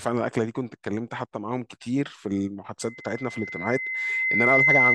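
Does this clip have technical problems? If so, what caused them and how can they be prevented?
Yes. A loudspeaker feedback squeal starts at 2.81 s and runs to the end of the speech clip. It is a single tone at 2.1 kHz. The microphone is hearing the loudspeaker it feeds, and at that frequency the loop gain exceeds one. The tone swells over about two seconds and ends up roughly 10 dB louder than the speech. To prevent it, lower the gain, move the microphone away from the loudspeaker, or notch out 2.1 kHz.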